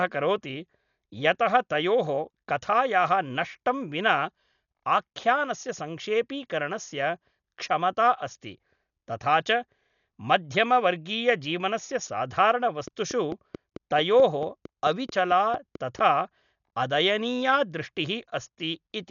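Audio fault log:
Throughout: Dolby Digital compression. A likely cause is an AC-3 style encoder starved of bits, consistent with a low rate near 48 kbps. It has cut the band so nothing sounds above 7 kHz and left many frequency lines filled with dither noise, so the speech is dull and roughly fluttering.
12.88 to 16.0 s: train of clicks. Interference or a faulty connection is the likely cause, injecting a repeated pulse about 4.5 times per second at a regular pace. Around fifteen similar clicks, peaking about 5 dB above the speech, tick steadily over the sound and through pauses.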